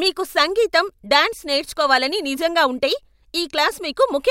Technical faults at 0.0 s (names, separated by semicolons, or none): none